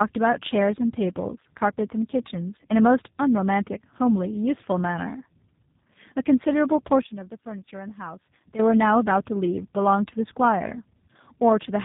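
Tandem speech coding runs through the whole clip: the speech passed through two low-rate speech coders in a row, which fits a GSM full-rate stage followed by G.729A, the second re-encoding the first's damage. Nothing remains above 3.7 kHz, and the sound is rough, muffled and warbly.

A sudden gain jump occurs from 7.01 to 8.59 s, where speech and background noise drop together by about 12 dB at once and return just as abruptly. This is likely a digital gain setting applied and removed without any ramp.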